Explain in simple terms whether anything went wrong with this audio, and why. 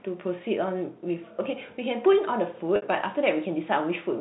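Packet loss with pitch repetition occurs from 2.76 to 2.82 s. About 60 ms of the sound went missing in transit, which fits two lost packets. The receiver filled the gap by repeating the last pitch cycle and fading it, causing a brief held buzz before the speech resumes.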